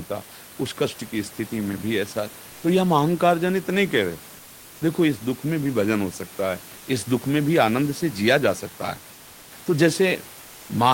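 From 10.41 to 10.69 s the room noise, sitting about 24 dB below the speech, gives way to a flat, featureless hiss about 1 dB quieter for 280 ms. This is comfort noise in place of the background, likely from discontinuous transmission such as Opus DTX.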